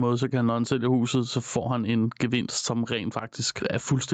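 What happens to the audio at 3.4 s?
At 3.4 s the speech is caught in the gain pumping that runs through the whole clip. The gain is pulled down by around 10 dB as soon as a loud syllable arrives, which points to an input gain set too high with a fast limiter or compressor as the likely cause. Unlike a noise gate, which cuts the background to near silence, pumping lets the background surge back audibly. The band tops out near 8 kHz through the Opus call path.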